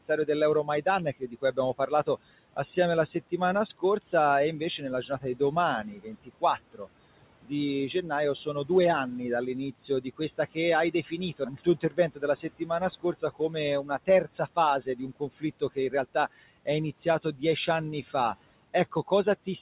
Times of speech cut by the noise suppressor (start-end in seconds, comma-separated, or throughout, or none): 0.04-2.58, 4.60-6.88, 7.43-8.70, 9.72-18.14, 18.92-19.47